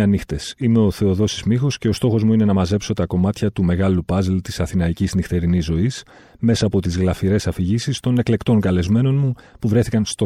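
No technical faults can be heard anywhere in this speech recording. There is no moment in it that needs a time mark or an explanation.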